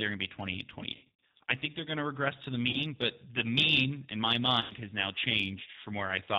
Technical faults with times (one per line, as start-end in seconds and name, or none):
0.00-6.39 G.729 codec
0.94-1.17 VoIP packet loss concealed by the speech codec
2.70-2.81 VoIP packet loss concealed by the speech codec
4.61-4.74 VoIP packet loss concealed by the speech codec